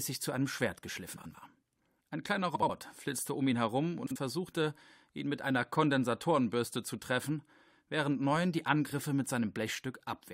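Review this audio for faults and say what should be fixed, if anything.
Frames out of order: neighbouring runs of coded frames were decoded in swapped sequence at 1.16–1.35, 2.55–2.70, 4.06–4.16 and 8.87–8.92 s, with swapped blocks of about 93, 70, 46 and 23 ms. Each stretch plays its halves exchanged, giving a brief garbled flutter, though no time goes missing. Fix this by carrying sequence numbers with every frame and reordering them in a jitter buffer before decoding.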